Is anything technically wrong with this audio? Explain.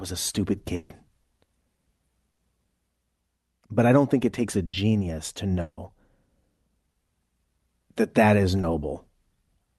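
Yes. The audio has several transmission gaps, each followed by resumption of the audio further on, plus a high-frequency ceiling near 12 kHz, which fits an Opus call path at a moderate bitrate.

Burst of packet loss at 0.75–0.91 s, 2.31–2.39 s and 4.65–4.75 s: consecutive packets arrived too late or not at all, and the receiver extended the last sound for about 140, 60 and 80 ms while fading it. Each gap is heard as a held buzz or fading hiss, and that stretch of the original audio is skipped.

Long network dropout at 5.61–5.79 s: the last sound is stretched for about 160 ms and dies away, and a short stretch of near-silence follows before the audio returns. This is likely a longer interruption in delivery, with the missing portion never played.

Short concealed packet loss at 8.61–8.65 s: roughly 20 ms failed to reach the decoder in time and was synthesised from the preceding sound, then crossfaded back. 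It comes across as a brief smear or wobble rather than an obvious gap.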